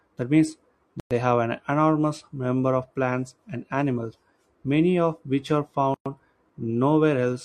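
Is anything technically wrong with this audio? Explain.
Yes. The speech breaks twice with a gap at a join of encoded pieces: from 1.00 to 1.11 s (about 110 ms), just before "have an enormous number", and from 5.94 to 6.06 s (about 116 ms), just after "many of which are". Each break is where two separately encoded segments were spliced untrimmed, leaving the encoder's start-up delay and end padding in place. The sound drops to silence with smeared edges, then resumes where it stopped.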